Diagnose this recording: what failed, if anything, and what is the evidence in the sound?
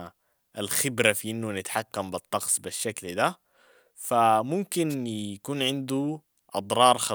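A wireless microphone noise hit at the analogue stage, in the radio link before conversion, runs from 4.89 to 4.95 s as a brief swish of static over the speech. The carrier faded for about 60 ms, probably as reflected paths cancelled it at the receiver, so receiver hiss rose over the audio. Unlike a network dropout, the sound is covered by noise instead of going silent or being patched over, and there is no repeated buffer-like pattern.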